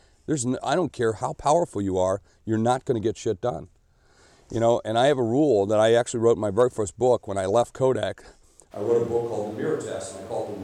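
At 8.73 s the close microphone likely drops out, a switch to a distant microphone: the speech abruptly turns roomy and hollow, about 5 dB quieter and noisier, to the end.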